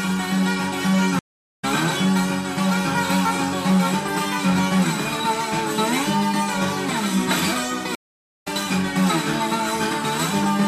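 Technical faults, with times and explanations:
1.19–1.65 s and 7.95–8.48 s, stream reconnect: the connection dropped, leaving 0.39 s and 0.46 s of silence. A fresh decoder resumes the sound roughly 0.3 s and 0.5 s further on.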